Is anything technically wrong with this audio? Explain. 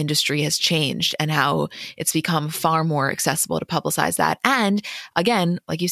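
No, nothing technically wrong stood out on listening to this speech recording.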